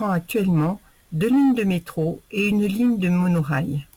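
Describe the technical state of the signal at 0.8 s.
At 0.8 s the speech carries crude rate conversion, present across the whole clip. Samples seem dropped or repeated without filtering, which fits a 48 kHz to 44.1 kHz change. The resulting error, roughly 30 dB down, adds a gritty, inharmonic fizz following loud, bright sounds.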